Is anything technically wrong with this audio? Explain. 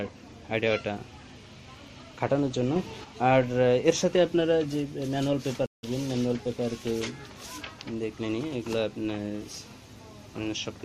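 Yes, there are two faults.

From 2.76 s to 3.04 s there is a sudden gain jump of about 5 dB. The level steps up abruptly rather than ramping, likely because a gain change was applied from one sample to the next without smoothing. The sound and its background noise get louder together for that stretch. On the waveform the envelope steps squarely at both edges. On a spectrogram the whole band brightens evenly across all frequencies.

At 5.66 s a Bluetooth dropout cuts the audio to silence for about 168 ms, until 5.86 s. This is likely packets failing to reach the headphones in time and being discarded. A gap that long points to a run of consecutive lost frames. The audio then resumes at a later point, as if it had kept playing through the gap. The waveform shows a flat, empty hole. The spectrogram shows a clean vertical blank stripe.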